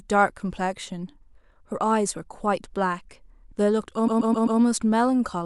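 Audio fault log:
4.07–4.59 s repeated frames: the speech stutters as one 130.6 ms fragment plays four extra times. A short run of compressed frames was sent again, which fits five frames, adding 0.52 s.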